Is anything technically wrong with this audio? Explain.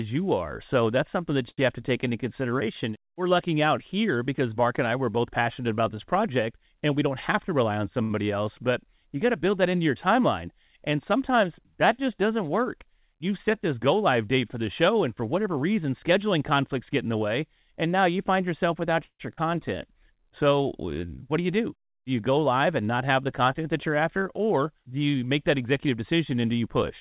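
Yes. This speech passed through a WebRTC call path, and the jitter buffer misbehaved several times. The narrowband call codec, which fits G.711 A-law at 64 kbps, leaves nothing above 4 kHz.

A short stall from a late packet occurs at 1.50 to 1.60 s, between "that's something that" and "you have to take", and again at 8.03 to 8.12 s. Each time a packet arrived late and the jitter buffer ran dry. The receiver stretched the last sound for about 76 ms and then 72 ms, and resumed where it stopped. Nothing is lost, but a sound is held too long.

A jitter buffer speed-up appears at 6.97 to 8.02 s, 15.20 to 16.03 s, 21.23 to 21.99 s, and 25.00 to 26.13 s, the last starting after "you're after or do". The buffer was holding too much audio, so the receiver repeatedly cut out pitch-period-sized pieces, roughly 50 to 100 ms in total each time. Speech runs at 106%, 109%, 106% and 108% speed with unchanged pitch, so it sounds hurried.

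A call audio freeze runs from 19.04 to 19.21 s, just after "now you find yourself". It was likely caused by packets delayed in transit emptying the buffer. The last sound continues as a fading fill for about 152 ms, including about 70 ms of silence, then picks up where it stopped, inserting a gap.

Short concealed packet loss follows at 19.33 to 19.39 s. About 40 ms of audio never reached the decoder, and the receiver patched the hole by extending the preceding sound before blending back, which is heard as a brief smear.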